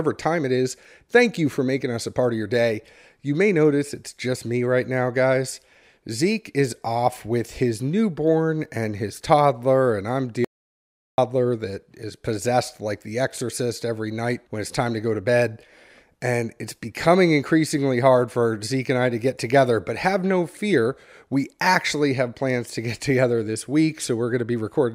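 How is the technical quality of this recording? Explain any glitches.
There's one glitch in the speech. At 10.45 s, after "his toddler and I'm", an audio dropout to silence kills the sound completely, with no room tone, for 0.74 s until "that is possessed like" at 11.18 s. Likely the input link dropped while recording continued, so that stretch is lost.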